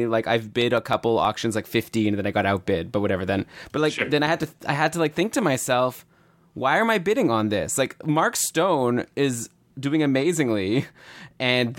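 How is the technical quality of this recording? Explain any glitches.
Two short bursts of CD scratch ticks mark the speech. From 0.46 to 1.41 s, before "like fifteen and then", and from 4.11 to 5.06 s, between "but like sure" and "think to myself why", there are seven ticks about seven per second. A blemish defeats error correction once per disc revolution, and the player patches the damaged samples, leaving gaps of a few milliseconds.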